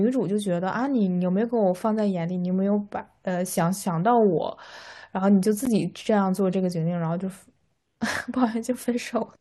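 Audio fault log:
5.65 s, gap between stream segments: a hard-edged hole of about 12 ms of silence cuts into the speech. Two consecutive segments are timestamped with a small space between them, and the player pads that space with silence instead of audio. No audio is lost.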